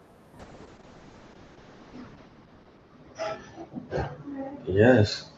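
Speech that turns rough, watery and muffled from 0.4 s to the end, with the top of the spectrum falling from about 20 kHz to 8 kHz. This is a call bitrate drop: the encoder's rate plunged, consistent with roughly 64 down to 6 kbps, so it codes coarsely and discards the highs, bottoming out for 1.62 s.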